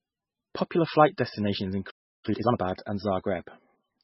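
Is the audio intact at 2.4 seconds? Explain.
No. From 2.25 to 2.57 s the speech is hurried by a time-compressed catch-up: after a stall, the player works off its backlog by cutting out short pieces and cross-fading the remaining ones, so this stretch plays at 2x speed with its pitch unchanged. It sounds rushed. On a spectrogram, syllables and pauses in that span are squeezed to half their usual length while the harmonic spacing stays the same. The waveform shows compressed envelopes with small splice seams.

Across the whole clip, including 2.4 s, there is heavy damage of the kind MP3 compression produces, likely from a very low bitrate of around 15 kbps. With so few bits, the encoder discards everything above 5.6 kHz and zeroes weak frequency lines, which then flicker on and off from frame to frame. The result sounds dull, watery and swirly, with chirpy s sounds and smeared consonant attacks. 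A spectrogram shows a hard ceiling at 5.6 kHz and patchy, blinking energy below it.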